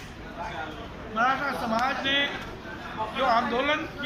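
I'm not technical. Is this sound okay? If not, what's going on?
No. There are two sharp clicks, at 2.28 s and 3.15 s, most likely from dropped samples: a tiny sliver of the recording, far less than a millisecond, went missing, so the sound jumps abruptly instead of flowing smoothly.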